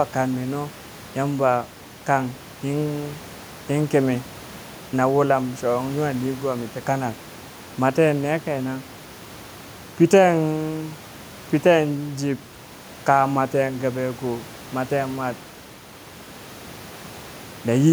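No technical faults are audible.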